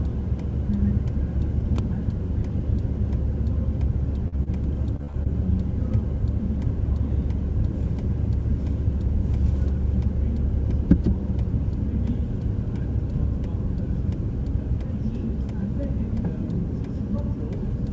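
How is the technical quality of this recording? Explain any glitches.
Three network glitches cluster between about 4.3 and 5.3 s, heard over a call-codec sound with nothing above 8 kHz, which fits G.722.

From 4.28 to 4.38 s there is a short concealed packet loss. About 40 ms never arrived, and the receiver extrapolated the last sound to fill the hole, leaving a brief smear where material is actually lost.

From 4.43 to 4.48 s there is a short stall from a late packet. The buffer ran dry, so the last sound was stretched by 30 ms and then resumed. You hear a held sound, but nothing is missing.

From 4.96 to 5.27 s there is repeated packet loss, which gives a robotic sound. Four gaps, the longest 32 ms, were each patched, so about a third of that stretch is synthetic. The repetition is what makes it choppy rather than a single smear.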